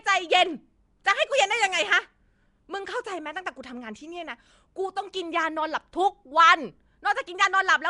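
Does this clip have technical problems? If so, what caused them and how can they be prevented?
Yes. The speech carries a rough, hissy halo with a smeared, underwater quality and nothing above 10.6 kHz, likely from Nellymoser compression: fixed-bit blocks leave weak bands empty and fill them with noise, and the damage fits a rate near 44 kbps. Recording or streaming through a modern codec such as Opus prevents it.

At 1.04 s, a brief hiss of about 10 ms arrives just before a sharp attack, softening it. This pre-echo happens because the transform spreads coding noise sized for the loud onset across the quiet moment before it. A codec that switches to short blocks at attacks avoids it.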